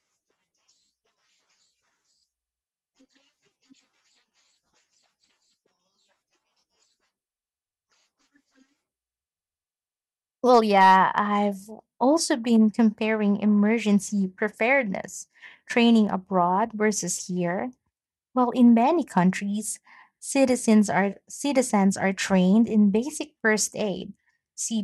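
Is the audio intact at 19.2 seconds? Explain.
No. Hard clipping occurs at 19.18 s, just after "in many": the speech peak runs about 2 dB past what a stage in the chain can pass, so its top is sliced flat. That flattening adds high harmonics, heard as a brief crackle.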